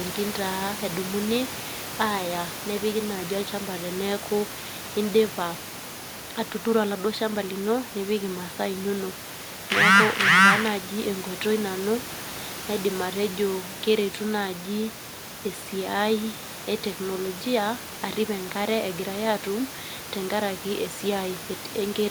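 From 0.20 s to 21.97 s the speech carries a steady train of faint ticks, about five per second and well over a hundred in all, sharpest on loud syllables and gone in pauses, where only the room noise about 14 dB below the speech remains. These are clock slip clicks, likely from two free-running clocks about 100 ppm apart, each tick a single sample dropped or repeated. Their even spacing sets them apart from the irregular clicks of packet loss or buffer underruns.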